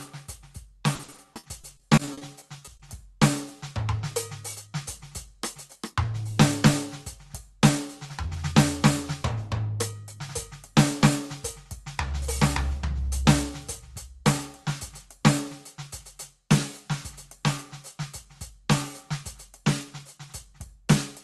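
A music recording sent over a call link, with repeated packet loss (robotic sound) from 0.95 to 2.81 s. Sixteen short gaps, the longest about 50 ms, are patched by stretching the preceding sound, so the music turns choppy, with pieces missing. The top end stops near 12 kHz, which fits a 32 kbps Opus stream.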